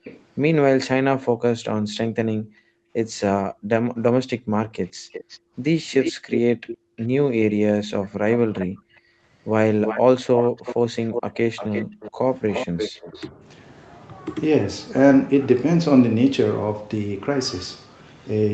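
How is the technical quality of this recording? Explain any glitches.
The recording has echo-control faults typical of a speakerphone call, heard through a call path that carries nothing above 8 kHz.

Echo leak: From 0.04 to 0.23 s, and again from 3.98 to 13.11 s, a delayed copy of the speech trails the original by 427 ms and then 351 ms. The copies sit around 20 dB and then around 10 dB below the speech. The likely cause is a loudspeaker on one side of the call whose echo canceller let part of the pickup through.

Background gated by the echo canceller: The room sound drops out at 1.30 to 1.41 s by about 40 dB. Between 2.38 and 6.97 s it drops, again by up to about 40 dB, for roughly one and a half seconds in total. Shallower dips follow at 8.67 to 9.24 s (about 29 dB) and 11.85 to 12.24 s (about 25 dB). The canceller is clamping the microphone while the loudspeaker plays.

Speech suppressed in double talk: At 13.11 to 13.3 s, just as the long echo stretch ends, the talker's speech dips by roughly 15 dB for about a tenth of a second. 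Both sides were likely talking at once, and the canceller pulled down the wanted speech along with the echo.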